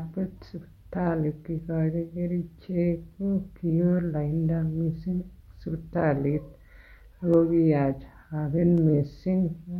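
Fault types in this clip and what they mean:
Clock drift buffer slips: a regular click every 1.44 s through the speech, likely two unsynchronised clocks dropping or repeating a few samples each time.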